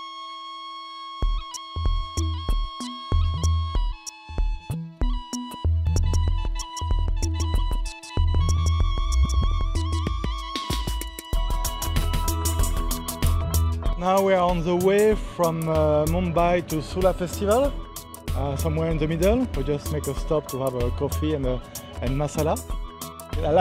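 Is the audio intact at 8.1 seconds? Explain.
No. A doubled audio track runs from 5.87 to 13.37 s, likely from a second, slower capture path. A full-band copy trails about 200 ms behind at roughly equal level, so every onset sounds twice as a dry echo. The waveform and spectrogram show each event repeated at that fixed spacing, with hard edges where the copy starts and stops.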